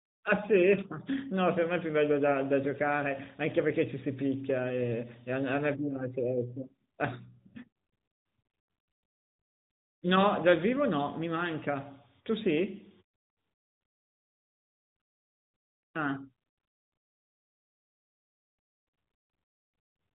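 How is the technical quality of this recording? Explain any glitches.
The technical quality holds up, with no glitches to explain in this recording.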